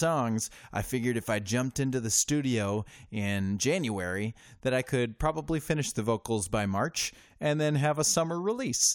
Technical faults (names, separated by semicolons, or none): none